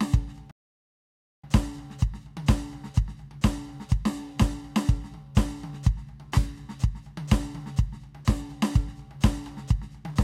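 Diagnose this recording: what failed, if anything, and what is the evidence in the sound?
The playback stage failed here: a playback stall hits the music at 0.51 s, and the output goes dead silent for about 0.92 s, until 1.44 s. The likely cause is the player running dry of data or having its thread blocked, leaving nothing to send out until it recovered.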